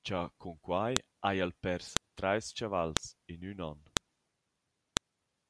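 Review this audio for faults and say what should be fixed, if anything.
One-second pieces of the speech were joined with their WAV headers left in, so a file header played as audio. Those header bytes become a sharp, loud click at 0.97, 1.97 (after "cun quai haja’l pers"), 2.97 (after "quai haja’l pers trais"), 3.97 (after "ün on") and 4.97 s. To prevent this, strip each piece's header before joining or streaming the raw samples.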